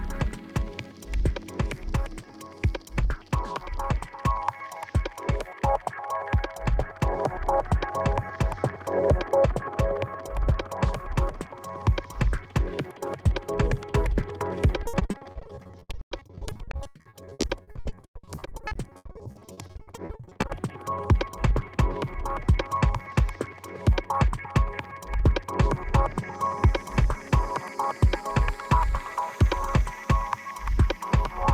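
From 14.83 to 20.51 s, repeated packet loss gives a robotic sound. Dozens of short holes arrive in quick succession, the longest 100 ms. Each is patched by stretching the last sound. About 2.6 s is filler, so the passage turns choppy.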